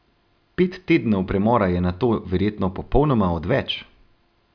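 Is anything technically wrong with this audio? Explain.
No, nothing here sounds technically wrong; it's just an ordinary bit of speech with nothing to flag.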